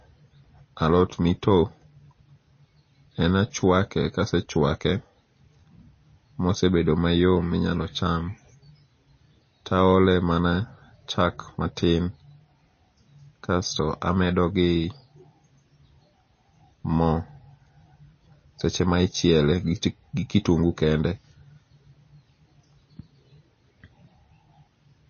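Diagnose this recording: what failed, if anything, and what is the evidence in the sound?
Codec stage: MP3 compression is the likely cause. Throughout the speech, nothing sounds above 6.5 kHz, and swirly, watery artefacts are plainly audible, pointing to a bitrate near 25 kbps.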